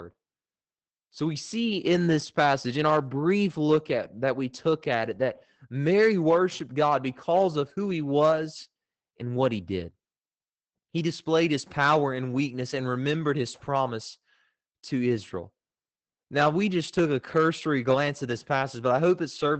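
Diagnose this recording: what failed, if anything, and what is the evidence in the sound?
The codec stage failed: Opus voice compression runs throughout this speech. Nothing sounds above about 8.4 kHz, and voices come across muffled, hoarse and faintly robotic. That fits SILK linear-prediction coding in wideband mode at roughly 12 kbps, where the excitation is quantised coarsely.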